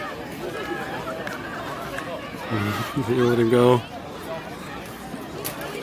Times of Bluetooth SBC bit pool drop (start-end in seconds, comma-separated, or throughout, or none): none